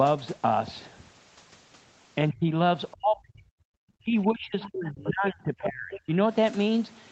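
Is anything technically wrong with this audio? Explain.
Yes. The speech suppressed in double talk appears at 2.31–2.49 s, 2.92–3.64 s and 3.99–6.18 s. Here the echo canceller likely clamped the talker while both sides spoke. The speech dips by up to about 40 dB, which shows as gapped, thinned waveform envelopes.

The other side's voice leaking through appears at 4.6–4.7 s, 4.86–5.1 s and 5.93–6.0 s, likely as residual loudspeaker echo. These are faint foreign fragments about 10 to 15 dB below the speech, showing as stray harmonic traces on the spectrogram.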